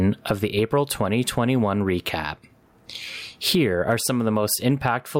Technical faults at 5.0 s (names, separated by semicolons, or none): gain pumping